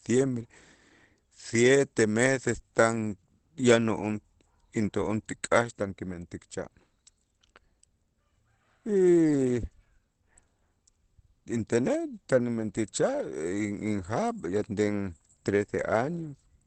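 Throughout the speech the sound is muffled and hoarse, with nothing above about 8.4 kHz and plainly audible roughness on every phrase. This is likely Opus compression running in its SILK speech mode at a low rate, consistent with 16 kbps wideband encoding.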